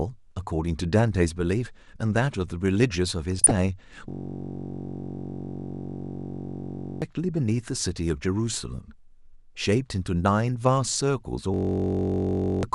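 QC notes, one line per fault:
QC notes, one line per fault:
Throughout: MP2 compression. The speech sounds dull, with a gurgling, grainy edge. The cause is likely MPEG Layer II coding at a low bitrate, and the damage fits something near 80 kbps. The coder splits the signal into 32 sub-bands and runs short of bits, so the upper bands shut off and flicker back. The bands that remain are coarsely quantised, which leaves the treble muffled and the texture granular.
3.39–3.51 s and 10.85–11.01 s: DAB burbling. Two short bursts of burbling sit over the speech. The second burst runs slightly longer. Bit errors, at a low rate of roughly a tenth and two tenths of a percent, have slipped past error correction into the MP2 data. Corrupted samples put short blips of noise into single sub-bands, and corrupted scale factors make sub-bands jump in level for up to a frame. That is why the sound turns to brief burbling rather than a clean dropout.
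4.10–7.02 s and 11.54–12.63 s: system hang loop. The speech stops and is replaced by a steady buzz. The same 21.3 ms fragment plays over and over at about 46.9 Hz, which fits a 1024-sample ring buffer. The computer or driver froze while the audio hardware kept cycling that buffer. Because the loop is so short, the repeats fuse into a tone rather than a stutter. About three seconds of audio are lost in the first hang and about one second in the second.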